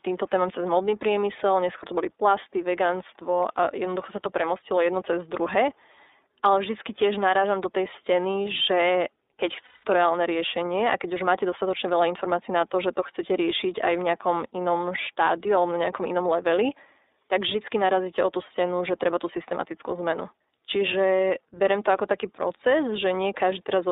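Throughout, the speech passes through the iLBC codec: nothing below 300 Hz or above 3.7 kHz survives, and the plainly audible rough, synthetic edge sets it apart from a clean telephone band-limit. The 30 ms framing fits its 13.33 kbps mode.

From 9.65 to 9.85 s, lost iLBC frames leave a gap that fits six missing 30 ms frames. The decoder fills it with a repeated pitch cycle mixed with noise, heard as a held, buzzy vowel rather than silence, and the voice comes back at once.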